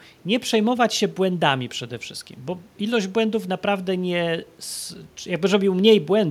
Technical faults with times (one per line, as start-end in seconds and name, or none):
none